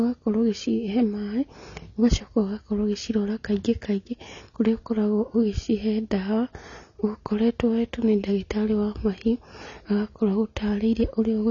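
Speech throughout carries plainly audible AAC compression damage, sounding dull and smeared with a warbling, fizzy edge on sibilants, likely from AAC-LC at a low bitrate near 24 kbps. A spectrogram shows nothing above 7 kHz.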